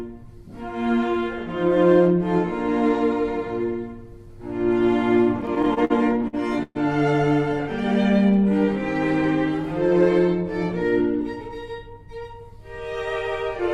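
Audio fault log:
5.41–6.77 s, repeated stalls (stutter): the receiver's buffer ran dry ten times, extending the last sound (longest hold 121 ms) to fill 317 ms, about a quarter of the span. Unlike packet loss, nothing is skipped; the audio halts, then resumes exactly where it stopped.
7.64–8.50 s, jitter buffer slow-down: to rebuild its reserve, the buffer repeated single pitch periods, adding 62 ms and running at 93% speed. Pitch stays put while sounds draw out, a continuous stretch rather than the distinct halts of a stall.
11.00–11.90 s, jitter buffer speed-up: with surplus audio queued, the receiver trimmed short pitch-period pieces, roughly 40 ms in all, so playback runs at 104% speed. The pitch is unchanged and no gap or click marks the cuts, which separates it from dropouts.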